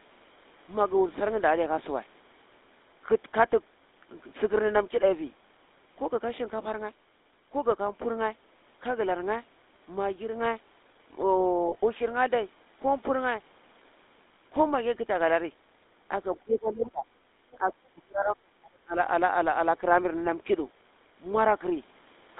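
Speech runs throughout with a buzzy, gravelly roughness and a narrow band of roughly 250 Hz to 3.7 kHz, the sound of the GSM full-rate codec at a rate that fits 13 kbps. Brief rough, metallic rings at 11.68 to 11.75 s, 14.34 to 14.36 s and 18.20 to 18.25 s are lost GSM frames, filled by repeating the last good frame for about 20 to 40 ms. The voice sinks by around 25 dB from 16.37 to 17.07 s, then by around 35 dB from 17.56 to 18.96 s, likely speech suppressed in double talk as the echo canceller ducked both sides. Just before, at 17.52 to 17.56 s, a faint second voice about 30 dB down slips through, likely the other side's voice leaking through past incomplete echo cancellation.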